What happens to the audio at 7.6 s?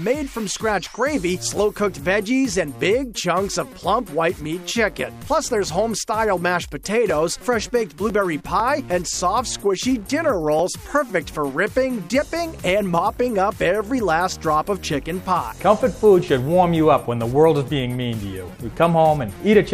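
At 7.6 s the audio falls within periodic USB or driver dropouts, 7.10 to 10.59 s: roughly a millisecond is skipped every 0.5 s, heard as regular ticks.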